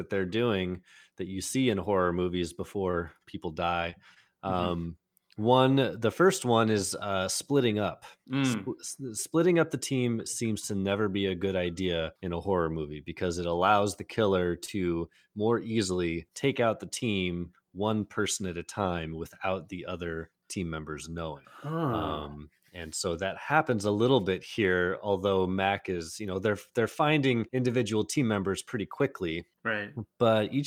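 A short stall from a late packet comes at 2.91 to 2.98 s, just after "see in horror movies". A packet arrived late and the jitter buffer ran dry. The receiver held the last sound for about 22 ms, then resumed where it had paused, giving a slightly stretched, faintly buzzy moment.

A short concealed packet loss follows at 3.90 to 3.94 s. About 20 ms of audio never arrived, and the receiver extended the preceding sound to cover the gap before blending back, leaving a brief smear.

A second stall from a late packet occurs at 4.14 to 4.18 s, with about 19 ms of held sound but nothing lost.

A second concealed packet loss at 14.65 to 14.69 s replaces about 20 ms with synthesized continuation, heard as a short wobble.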